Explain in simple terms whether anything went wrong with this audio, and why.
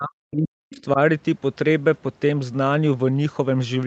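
Two things go wrong in the first second. From 0.0 to 0.98 s, the speech fades and drops out in pieces, at times almost to silence, for most of that stretch. This is speech suppressed in double talk. Likely both sides spoke at once, and the call's echo canceller turned down the talker along with the echo.

Between 0.73 and 0.82 s, a faint second voice slips through. This is the other side's voice leaking through. It likely came from the talker's loudspeaker, and the echo canceller failed to remove it fully from the microphone.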